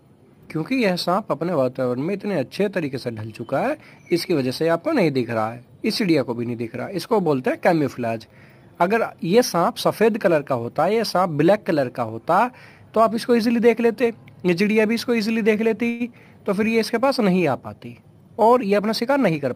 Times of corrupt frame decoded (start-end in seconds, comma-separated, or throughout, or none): none